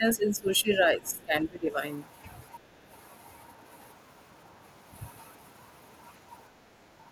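From 0.00 to 1.77 s the talker's level dips by about 15 dB in pieces, dulled and broken, likely speech suppressed in double talk as the echo canceller ducked both sides. Within that, from 1.03 to 1.24 s, a second voice is faintly audible far beneath the talker, probably the other side's voice leaking through from the loudspeaker. From 2.61 to 2.74 s the room background drops by about 6 dB and then recovers, which is background gated by the echo canceller while the loudspeaker played. From 6.86 to 7.09 s the talker again dips by roughly 15 dB, a further short instance of speech suppressed in double talk.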